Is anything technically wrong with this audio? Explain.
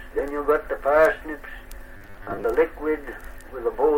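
Yes. From 1.97 to 2.44 s there's robotic sound from repeated short buffers: a rigid, metallic buzz locked at 100 Hz. It's likely from audio arriving too slowly, so a 10 ms chunk gets replayed over and over, with about half the material repeated instead of real audio.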